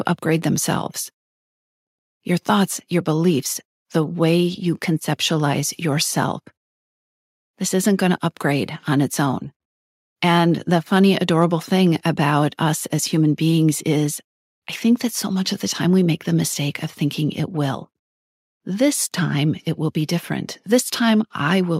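No technical faults are audible.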